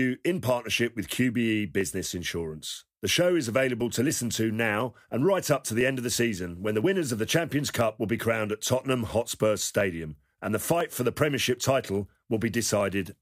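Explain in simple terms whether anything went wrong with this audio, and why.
Small, regular ticks run through the speech about once every second, from 0.80 s to 12.81 s. Each is a tiny click, heard only while someone is talking. These are periodic USB or driver dropouts: some other task on the computer briefly stalls the audio connection at a fixed interval, and each time about half a millisecond of sound is skipped. That sudden jump in the waveform is what makes the click.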